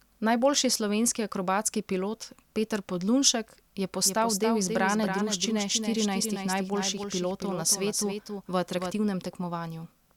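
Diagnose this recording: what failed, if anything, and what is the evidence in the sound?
A doubled audio track runs from 4.03 to 8.91 s. A dry, full-band copy of the speech trails about 300 ms behind, roughly 5 dB quieter, and starts and stops abruptly. A spectrogram shows each syllable duplicated slightly to the right. The likely cause is a second, slower capture path mixed in.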